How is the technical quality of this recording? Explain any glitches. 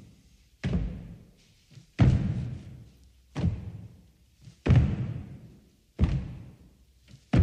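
No glitches or faults heard.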